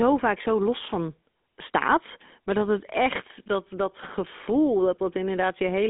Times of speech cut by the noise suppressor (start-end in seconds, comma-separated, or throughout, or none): none